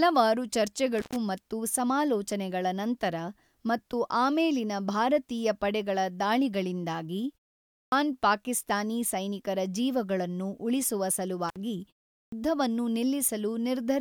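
At 0.99 s, just before "ಮತ್ತು ಸಮಾಲೋಚನೆಗಳ ನಂತರ ಮತ್ತು", an intermittent contact opens for about 108 ms. A loose connection cuts the sound out with a crackle at each edge. It happens again at 11.49 s for about 57 ms, right after "ಪಾಕಿಸ್ತಾನಿ ಸೈನಿಕರ ಜೀವಗಳನ್ನು ಉಳಿಸುವ".

At 7.79 s and 12.18 s there's a clipped start after a pause. The output device dozes off during short gaps of about half a second and a third of a second, then wakes late. That swallows about 132 ms and 143 ms of onset, so "ಪಾಕಿಸ್ತಾನಿ ಸೈನಿಕರ ಜೀವಗಳನ್ನು ಉಳಿಸುವ" lurches in abruptly.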